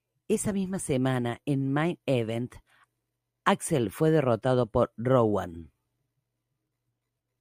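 No technical faults are audible.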